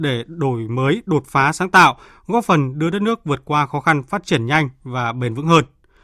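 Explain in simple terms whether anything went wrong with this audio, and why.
Nothing went wrong with this speech recording; I can't hear a single technical fault anywhere in it. There are no dropouts, glitches or other problems to point to at any moment.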